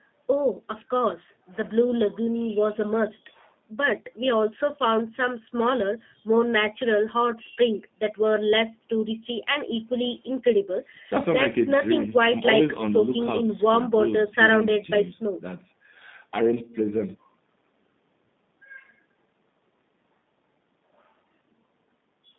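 From start to finish the speech carries plainly audible G.729 codec damage. The sound is rebuilt from a vocal tract filter, a pitch predictor and a few pulses per frame, so it comes out rough and slightly synthetic, with that reconstructed quality typical of a low-rate model, which fits 8 kbit/s. The band is limited to roughly 150 Hz to 3.7 kHz, removing the upper presence and air. The call microphone's high-pass filter trimming the deepest bass is ordinary call processing.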